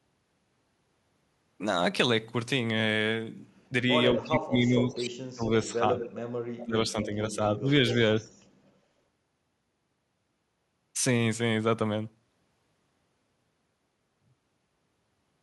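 At 3.69 to 3.73 s, and across 4.14 to 7.94 s, speech is suppressed in double talk: the voice dips about 10 dB, then up to about 30 dB, likely from an echo canceller ducking during overlap, showing as waveform notches and thinned spectrogram energy. Echo leak follows at 4.17–4.22, 4.9–4.95, 5.99–6.06 and 7.9–8.47 s: repeats delayed 235–238 ms, about 10 dB below speech (about 25 dB at 4.9 s), likely residual loudspeaker echo, appearing as faded duplicate spectrogram patterns.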